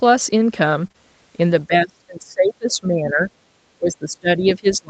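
A speech recording carried over an Opus call link limited to 8 kHz, with two kinds of network fault. At 0.83 s and again at 1.84 s a lost packet was rebuilt from error correction: the following packet carried a low-bitrate copy, so the decoder played that instead of leaving a gap. Each 20 ms stretch comes out rougher and noisier than its surroundings. Right after the first repair, two back-to-back short concealed packet losses, from 0.87 to 0.92 s and from 0.92 to 0.96 s, arrived too late to use. The decoder extended the preceding sound to fill each 20 ms hole, which gives a brief smeared wobble just under a tenth of a second long. From 1.67 to 3.31 s and again from 3.78 s to the end, the speech sinks in level, dropping by roughly 25 dB at its deepest and fading in patches across about a second and a half of the first span. This is likely speech suppressed in double talk, where an echo canceller, unable to tell the talker apart from the far side's echo, turned the talker down along with it.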